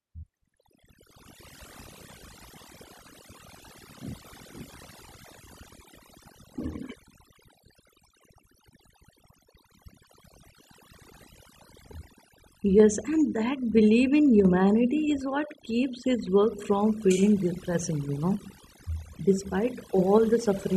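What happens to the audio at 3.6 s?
At 3.6 s the speech is affected by overdone noise removal, which runs through the entire clip rather than starting there. A noise reduction stage set too aggressively is pulling individual frequency bands down to near nothing whenever they resemble its noise estimate, taking softer parts of the voice along. The background falls to an unnatural hush dotted with twinkling specks. Unlike a low-bitrate codec, the damage tracks the noise floor, not the bit budget.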